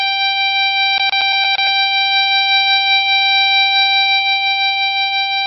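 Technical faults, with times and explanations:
Throughout, likely MP3 compression: the music has nothing above 5.7 kHz, so it sounds dull and watery, with swirling, metallic smearing on attacks. The heavy damage points to a very low bitrate of around 16 kbps. A spectrogram shows a flat ceiling at 5.7 kHz and patchy, flickering blocks below it.
0.98 to 1.67 s, CD stuck on one turn: the same 115 ms fragment plays six times, with a brief mute at each jump back, giving a fast, even stutter like a skipping disc. On a waveform, identical short segments repeat, separated by tiny gaps.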